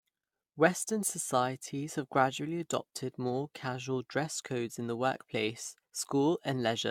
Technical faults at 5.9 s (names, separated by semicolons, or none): generation loss